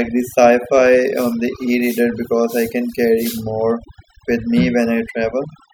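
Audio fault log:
Throughout, overdone noise removal: the gaps between phrases drop to an unnatural near-silence dotted with twinkling specks, and the speech has its quieter detail hollowed out. A noise reduction stage was pushed too hard, switching individual frequency bands down or off whenever they sat close to its noise estimate, so leftover bits of background flicker in and out while the softer parts of the speech are stripped away along with the background noise.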